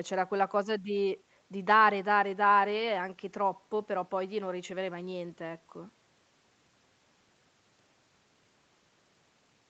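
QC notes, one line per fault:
Nothing stood out on listening to this speech, which carries the ordinary sound of a call's microphone processing with its top end stopping at about 8 kHz.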